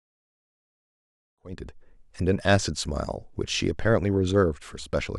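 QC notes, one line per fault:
No faults found in the speech. The level rises in a smooth fade-in from about 1.5 s to 1.85 s, with no click or hard edge.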